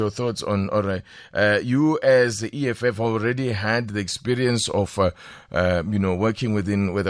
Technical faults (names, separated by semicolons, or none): none